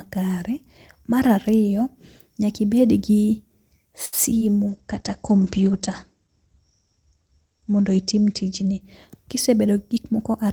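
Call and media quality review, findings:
Short stall from a late packet, 4.05 to 4.15 s. Sound held about 71 ms, slight buzz. Component: jitter buffer, receive side. Packet late, buffer ran dry. Last sound stretched until arrival, then playback resumed at the same point. Nothing lost. Latency up 71 ms afterwards.

Short concealed packet loss, 4.39 to 4.43 s. Brief smear. Component: decoder concealment. About 20 ms never arrived in time. Gap filled with 22 ms extrapolated from the preceding sound, then crossfaded back into real audio. A short consonant may be lost here.

Call bitrate drop, 4.70 to 9.05 s. Audio turns rough and muffled. Component: sender rate control and Opus encoder. Bandwidth estimate fell. Target cut from 32 kbps to 12 kbps, held at the floor about 3 s. Audio band narrowed from 20 kHz to 8 kHz. Coarser coding, top end gone until recovery.

Jitter buffer speed-up, 9.35 to 10.26 s. 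Sound runs about 6% fast, pitch unchanged, hurried. Component: jitter buffer time-scaling. Buffer over target after bunched arrivals. Short pitch-period chunks removed repeatedly, around 70 ms in total, to pull latency back down.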